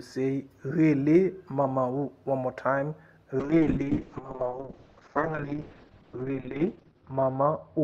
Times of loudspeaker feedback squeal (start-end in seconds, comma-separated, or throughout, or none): none